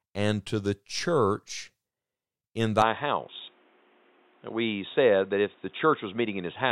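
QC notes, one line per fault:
2.82–6.71 s, input switched to a poorer device: capture likely moved to a narrowband input, cutting everything above 3.8 kHz, so speech turns dull and boxy over a quiet new noise floor, with no gap at the switch.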